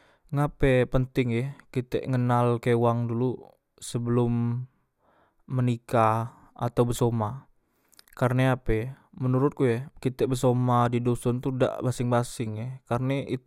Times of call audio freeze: none

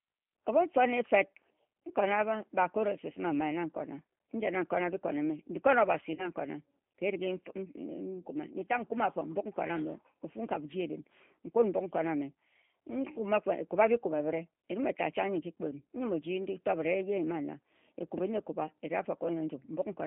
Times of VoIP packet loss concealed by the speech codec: 6.15-6.29

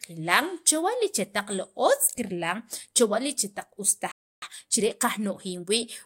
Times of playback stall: 4.11-4.42

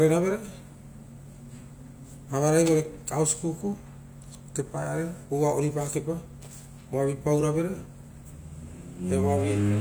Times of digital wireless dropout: none

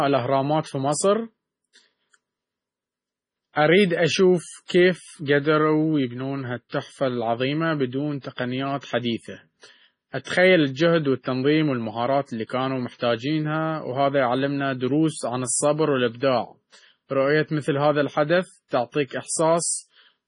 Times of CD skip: none

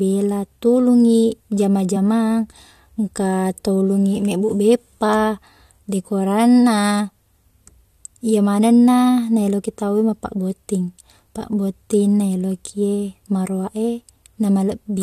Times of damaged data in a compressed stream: 1.95-1.97

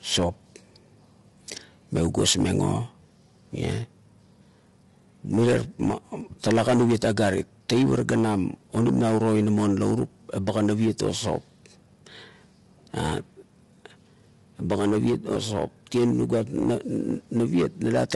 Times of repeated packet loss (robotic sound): none

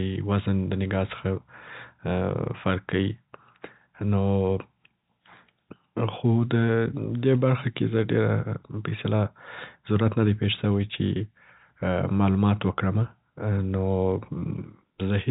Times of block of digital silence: none

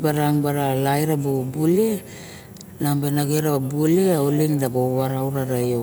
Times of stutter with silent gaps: none

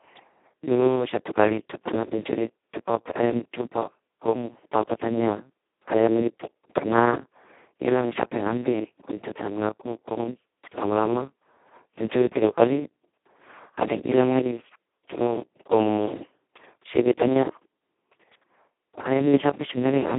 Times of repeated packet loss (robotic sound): none

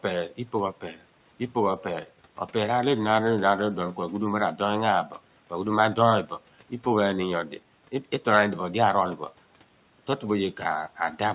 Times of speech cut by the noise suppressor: 0.81-1.02

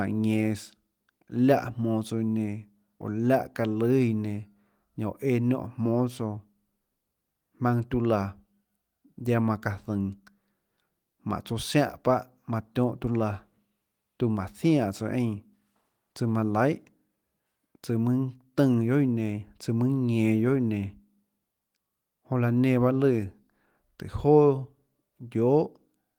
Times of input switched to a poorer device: none

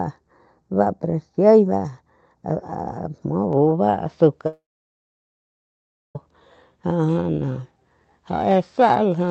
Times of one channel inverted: none

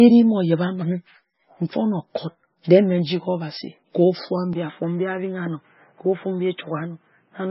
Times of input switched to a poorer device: 4.53-7.51

